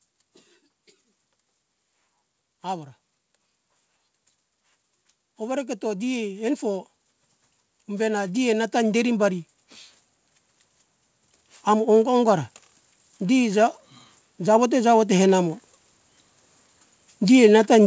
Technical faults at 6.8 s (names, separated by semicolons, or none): automatic gain rising